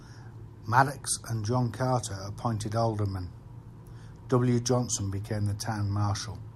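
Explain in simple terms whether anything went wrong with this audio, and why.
Nothing went wrong with this audio; the recording has no audible problems.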